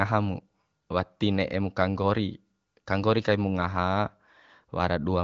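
No faults found: the speech sits on an AMR wideband (HD Voice) path, with content ending near 7.3 kHz and a clarity that fits one of the upper AMR-WB rates, around 18 kbit/s.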